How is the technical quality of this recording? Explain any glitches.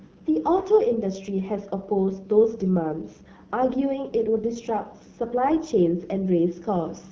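The quality is limited by plainly audible codec damage across the whole clip. Throughout, the AMR wideband (HD Voice) codec leaves the speech rough and raspy, which points to one of its lowest rates, around 8.85 kbit/s. Too few bits remain to model the vocal tract cleanly. A spectrogram shows a hard ceiling at 7 kHz, with smeared, noise-like texture between 6.4 and 7 kHz.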